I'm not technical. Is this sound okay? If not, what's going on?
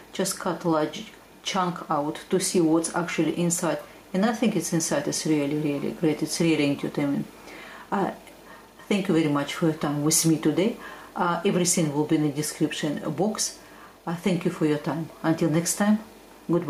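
No, not quite. All the way through, the level keeps breathing: whenever something loud comes in, the sound gets pulled down. That's called gain pumping. It's likely because the input was turned up far too high and an automatic limiter keeps yanking it back down on every loud moment. The upshot is that loud and soft parts end up squashed together.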